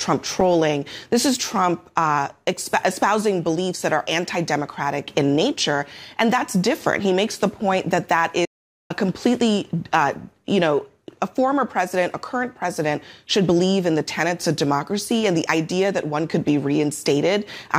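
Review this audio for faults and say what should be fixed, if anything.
There's an audio dropout to silence from 8.46 to 8.90 s: the sound cuts off mid-flow, about 447 ms of dead silence with no room tone, then resumes. The input likely dropped briefly (a loose link or a mute) while recording carried on. Secure connections and monitor input meters live.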